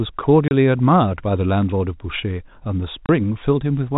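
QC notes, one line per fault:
0.48–0.51 s and 3.06–3.09 s, packet loss filled with silence: a single packet's worth of audio, which fits a 30 ms packet, never arrived and the receiver inserted digital silence, so the G.711 telephone-band speech drops out abruptly for 30 ms.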